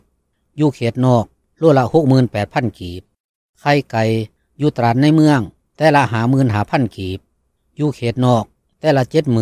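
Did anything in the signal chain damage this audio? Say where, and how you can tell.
No, nothing in the signal chain audibly damaged this audio. There is no point at which any stage, from capture to playback, leaves a mark on the sound.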